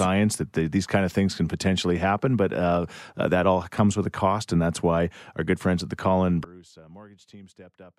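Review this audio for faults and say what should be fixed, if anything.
Sudden gain jump at 6.44 s: from that instant to the end, the speech and its background noise drop together by about 24 dB in a single step. This is likely a digital gain setting applied between one sample and the next with no ramp. To prevent it, smooth every gain change over a short fade of several milliseconds instead of switching it instantly.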